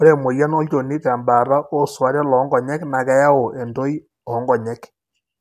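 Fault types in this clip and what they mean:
No technical faults can be heard in this speech recording. There is nothing here to list by type.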